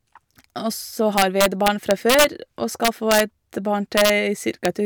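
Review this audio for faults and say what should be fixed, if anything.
Integer overflow cracks break into the speech from 1.18 to 2.24 s (about 4 dB over full scale), 2.85 to 3.20 s and 3.98 to 4.10 s (about 2 dB each), and at 4.65 s (about 1 dB). Peaks past the integer ceiling wrap to the opposite extreme, so the waveform shows sudden jumps from one extreme to the other and the spectrogram shows bright vertical broadband streaks. Fix the arithmetic with saturating limits or headroom before conversion.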